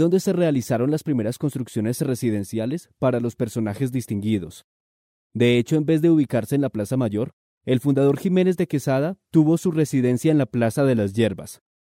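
A block of digital silence at 8.60 s: the signal drops straight to zero for about 0.67 ms, which fits a 32-sample block left unfilled, and then resumes. Neither edge has a fade, so the abrupt jumps down to silence and back up to the waveform merge into one brief click. The gap is far too short to hear as a hole. It comes across only as a single sharp tick in the sound.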